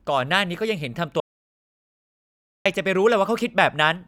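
Audio dropout to silence, 1.20 to 2.66 s: speech cuts out into 1.45 s of dead silence without room tone, likely lost input recorded as silence.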